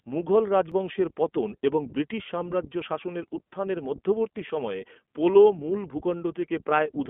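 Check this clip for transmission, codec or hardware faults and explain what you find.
Two faults are audible: narrowband iLBC coding across the whole speech clip, and a single skipped stretch of audio early on.

The iLBC codec damage runs from start to finish. The clip is confined to a telephone-style band, with nothing above about 3.4 kHz, so sibilants and consonant detail sound dull. Each short frame's excitation is rebuilt without reference to the previous one. This fits 20 ms frames at the 15.2 kbps mode, and it leaves the voice with a plainly audible rough, slightly synthetic grain. That grain is what separates it from a simple band-limiting filter, which would dull the sound without roughening it.

At 0.72 s, just before "পতন এবং ব্রিটিশ সাম্রাজ্য", there is a brief jump where the waveform skips forward. A tiny slice of audio, roughly a few milliseconds, is missing, and the two sides are butted together with no gap. 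This is likely a dropped buffer (overrun), where the capture software fell behind and the hardware overwrote samples before they were read. Unlike a packet-loss dropout, there is no silence or concealment smear, only a sharp discontinuity.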